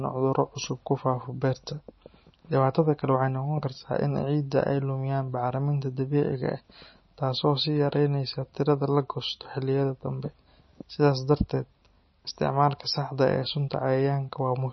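From start to finish, the speech has nothing above 5.9 kHz. The treble stops at a hard edge. Below that edge the sound is watery and swirly. Sibilants break into metallic chirps, and consonant attacks smear. The damage is heavy. The likely cause is MP3 compression, and the sound fits a very low bitrate, around 26 kbps. Starved of bits, the encoder cuts the top band and drops weak frequency lines. These flicker on and off between frames.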